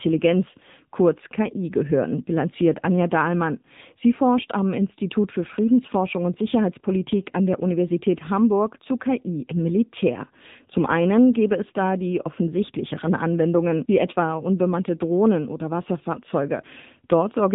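The speech has been through the AMR narrowband mobile codec for its whole length, and the damage is plainly audible. Nothing survives above about 3.8 kHz, so sibilants and breath lose their edge and the voice sounds boxed-in and phone-like. At a rate that points to about 7.95 kbps, the few excitation pulses per frame leave the voice buzzy and synthetic. A spectrogram would show a hard ceiling near 3.8 kHz with empty space above it for the full duration.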